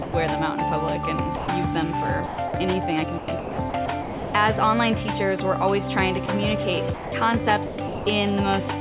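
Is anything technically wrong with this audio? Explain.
Yes. The audio has two kinds of fault.

Sound dropped by the voice detector occurs at 0.02–0.14 s, 1.36–1.48 s, 6.26–6.28 s and 6.94–7.12 s. Each time, the sound gives way to steady synthetic noise for 120, 120, 20 and 180 ms respectively, then returns. The likely cause is a sender-side voice activity detector that judged the material to be background and stopped transmitting. The receiver filled each gap with generated comfort noise, and the original sound in those stretches is lost.

Sound chopped by the voice detector occurs at 2.26–2.54 s, 3.18–4.34 s and 7.66–8.06 s. Within each window the sound repeatedly cuts to comfort noise and back, so there are several holes rather than one. In total, 180 ms, 660 ms and 300 ms of those windows are replaced. This is likely caused by the detector toggling between sending and not sending within each stretch. 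The whole clip stays band-limited to about 4 kHz, as expected from the G.711 A-law call path.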